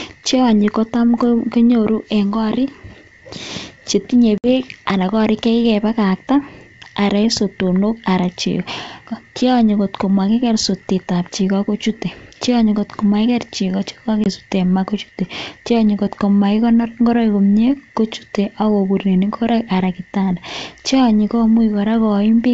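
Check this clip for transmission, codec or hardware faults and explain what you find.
Two dropouts from packet loss on an ADPCM call interrupt the speech, carried on G.722 wideband telephone coding whose bandwidth reaches about 7 kHz.

At 4.38 to 4.47 s, 60 ms of audio is lost, which fits roughly three packets. At 14.24 to 14.27 s, a 20 ms gap fits a single packet. Each gap is filled with silence. Afterwards the decoder's adaptive predictor and step size no longer match the sender's, so the sound returns slightly distorted until the decoder resynchronises. On a waveform, each gap is a flat line with abrupt edges. On a spectrogram, it is a clean vertical blank band, followed by a short stretch where the ADPCM decoder recovers.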